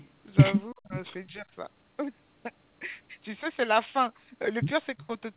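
A faint, delayed copy of the speech, about 30 dB down and trailing by 334 ms, sounds at 0.0 to 0.06 s, likely echo leak from a loudspeaker past the far side's echo canceller. At 0.72 to 0.95 s the speech abruptly drops away almost completely, and at 1.28 to 1.46 s it dips more gently, likely speech suppressed in double talk as the canceller turned down both sides. Another quiet echo leak, this time 362 ms behind, returns at 4.98 to 5.07 s.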